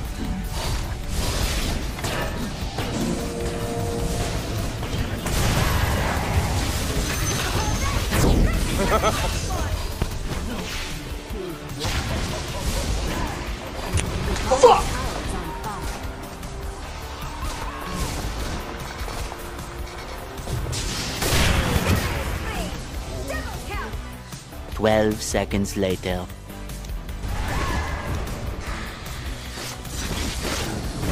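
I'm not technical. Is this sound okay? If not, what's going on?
No. A sudden electrical jolt, likely from a plug, switch or static discharge, got into the signal twice. Each one is heard as a loud pop sitting on top of the sound: a single one at 10.02 to 10.04 s, and two in quick succession between 21.76 and 21.95 s.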